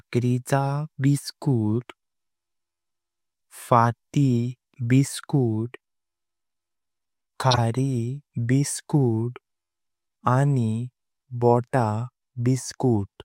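At 7.51 s the speech gets hit by a corrupt frame decoded: a short, loud burst running to about 7.58 s, roughly 75 ms, which spans a handful of codec frames, maybe three. Bits in those compressed frames got flipped, and the decoder played them anyway, so misread gains and codes dumped energy at the wrong frequencies. It comes through as a harsh chirpy blip, peaking not far below full scale.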